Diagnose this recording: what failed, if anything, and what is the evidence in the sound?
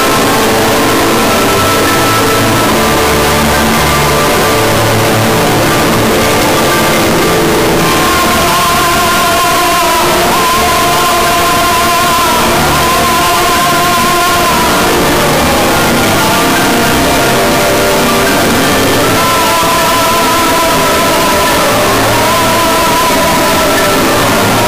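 Sample-format conversion failed throughout. Harsh, very loud distortion with no quiet passages points to signed and unsigned mixed up, likely flipping the top bit of the 8-bit samples.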